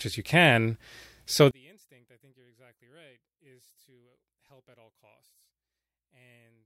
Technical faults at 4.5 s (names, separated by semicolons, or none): one channel inverted